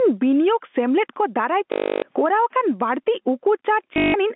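Gain pumping runs through the whole clip, with a swing of around 10 dB. The likely cause is input gain set far too high, with a fast limiter clamping every peak and squashing the dynamics.

Packet loss with last packet repeated occurs from 1.72 to 2.02 s, 300 ms in total, and again from 3.94 to 4.14 s, where 180 ms is lost across 200 ms and the longest run is 160 ms. The receiver replays the final good packet, and such repeats seldom line up with the pitch period. Each run produces a robotic buzz at 50 Hz, which fits 20 ms packets.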